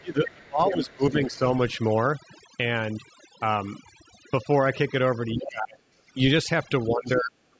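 Right from the start, and for the whole clip, there's overdone noise removal. The suppressor clamps down on any band sitting near its noise estimate, so the background drops and breaks up with little twinkly specks. It's band-limited to about 8 kHz, which is just the call processing.

From 0.0 to 1.03 s the speech dips by something like 25 dB, most of that first second. That's speech suppressed in double talk, likely the echo canceller ducking everything while both ends were talking. The same thing happens again from 5.34 to 6.17 s and from 6.9 to 7.37 s.

The other side's voice leaking through shows up as faint scraps at 1.03 to 1.08 s, 1.34 to 1.38 s and 7.06 to 7.1 s, roughly 25 to 30 dB under the speech. That's likely loudspeaker echo the canceller didn't fully remove.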